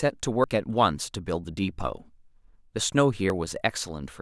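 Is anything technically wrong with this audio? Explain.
Yes. At 0.44, 1.44 and 3.3 s the speech jumps forward, with no gap in between. It's likely a dropped buffer (overrun), losing roughly 70 ms at the first and about 20 ms at the other two.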